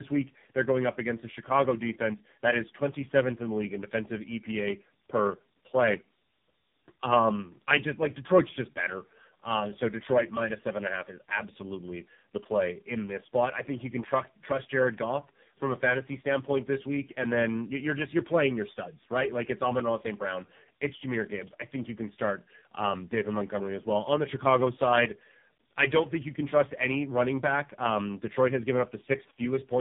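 From start to finish the speech carries tandem speech coding: it has been decoded and re-encoded at several network borders, with each low-rate coder working on the damaged output of the one before. The result is rougher, more muffled and more warbly than any single coder produces. Layered distortion, rather than one consistent codec texture, sets it apart from a lone low-bitrate codec. The sound fits three speech codecs in a row ending in AMR-NB at about 6.7 kbit/s, and nothing remains above 3.8 kHz.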